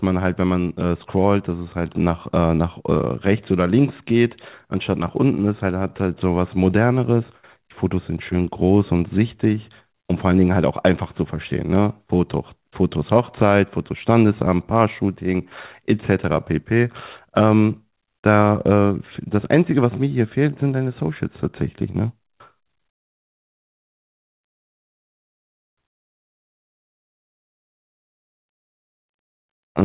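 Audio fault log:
The speech arrives over a call path working as expected, carrying the narrowband sound of G.711 mu-law at 64 kbps with nothing above 4 kHz, and no faults are heard anywhere in it.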